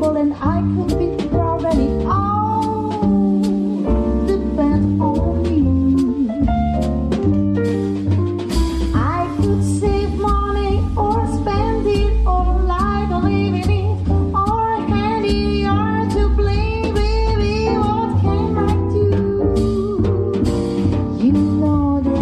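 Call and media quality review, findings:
No faults found in this call and media quality review.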